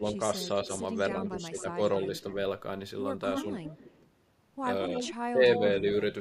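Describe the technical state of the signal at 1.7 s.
Speech suppressed in double talk spans 1.1 to 1.79 s, so 1.7 s falls near its end. With both sides talking at once, the echo canceller likely could not tell this talker from loudspeaker echo and turned both down. The speech dips by up to about 10 dB, roughly 300 ms in total.

Echo leak, from 1.3 to 1.62 s, ends just before this moment. It is a faint copy of the speech, about 15 dB down and delayed by 257 ms, likely from a far-end echo canceller that left part of its loudspeaker pickup in the signal.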